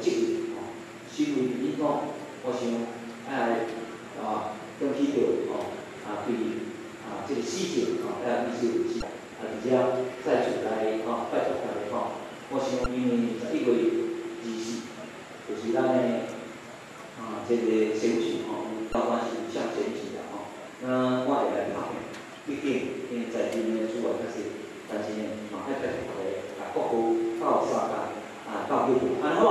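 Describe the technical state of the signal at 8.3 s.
At 8.3 s the signal is intact, with no dropout, distortion or other fault at that moment.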